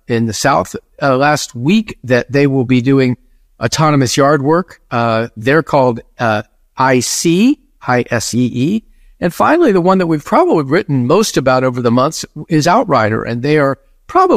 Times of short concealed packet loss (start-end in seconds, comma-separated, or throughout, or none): none